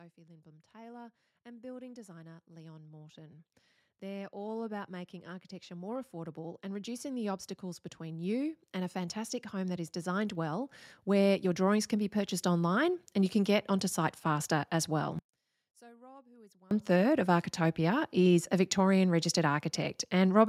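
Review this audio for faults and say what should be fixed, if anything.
The automatic gain control judged the input too quiet and kept raising its gain from 0.14 s to 13.44 s, climbing by about 26 dB. The voice and the background noise swell together across those thirteen seconds, so the level keeps creeping upward instead of holding steady, settling only just before "get onto site faster". To prevent it, disable the automatic gain control and set a fixed input gain before recording.

From 15.19 s to 16.71 s, after "site faster as well" and before "third of", the speech collapses by about 33 dB into a faint remnant. The likely cause is one channel inverted: with one stereo channel's polarity reversed, the centred voice common to both channels cancels when they are summed to mono, leaving only their small difference. To prevent it, check channel polarity in the signal chain and confirm the mono sum before delivery.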